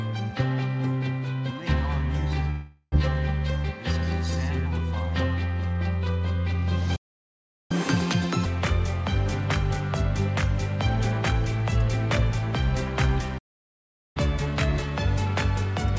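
From 2.50 to 2.94 s there is a long network dropout, likely from packets failing to arrive: the last sound is stretched into a fading buzz for about 0.42 s, then a brief silence, and roughly 0.4 s of material is simply gone when audio returns. The concealment buzz and the missing content set it apart from a stall.

At 6.96 s a playback stall cuts the sound dead for about 0.74 s, likely the player starving for data. From 7.71 to 8.45 s the catch-up at higher speed plays the backlog at 2.0x, pitch jumping roughly ten semitones, a chipmunk-like rush that clearly marks recovery rather than loss.

A second playback stall runs from 13.38 to 14.17 s, again a clean gap of about 0.77 s with no buzz. This time the catch-up at higher speed is gentle, 1.1x from 14.17 s to the end at 16 s, lifting pitch only about a semitone and a half. Across the whole clip the band stops at about 7 kHz, consistent with the G.722 call codec at 64 kbps.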